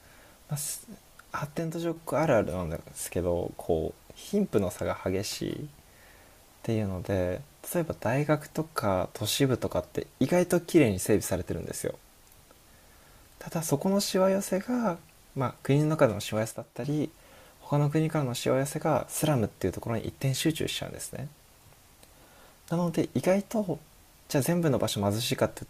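One channel likely drops out of the stereo pair twice, from 1.59 to 1.96 s and from 16.51 to 16.84 s. With half the signal gone from the mono sum, the speech falls abruptly by about 6 dB and snaps back after roughly a third of a second.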